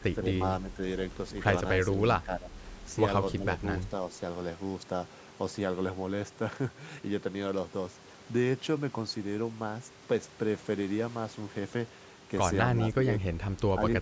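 At 0.0–0.09, 0.71–0.79, 2.22–2.54, 3.35–3.61, 12.75–13.1 and 13.29–13.39 s the speech briefly sinks by about 5 to 15 dB, likely speech suppressed in double talk. Each shows as a notch in the waveform envelope and a faded patch on the spectrogram.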